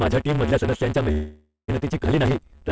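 Throughout the speech, one stage writes longer blocks than the next stage reads, which fits 512-sample blocks, and each block's tail is discarded. This block size mismatch (truncated) produces a 150 Hz buzz at the block rate and makes the speech run 1.6 times too fast while staying near its normal pitch. The G.722 call path adds its own coding texture and leaves nothing above 8 kHz.

From 1.12 to 1.70 s, the jitter buffer likely ran dry because packets were held up in transit. This is a call audio freeze: the receiver stretches the last sound into 563 ms of fill that fades, and the final 150 ms is silent. Speech then resumes exactly where it stopped, with nothing lost, but everything after arrives 563 ms later.

Between 2.04 and 2.07 s, audio was dropped while later audio was already queued, so playback skips ahead. About a fifth of a second of speech is missing, and the two sides are joined by only 4 ms of fill, an almost direct splice that removes about 200 ms of the accumulated delay.

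From 2.29 to 2.61 s, the jitter buffer rebuilds its reserve by repeating single pitch periods many times in a row. This jitter buffer slow-down adds 42 ms, so the speech plays at 89% speed at unchanged pitch, with drawn-out sounds.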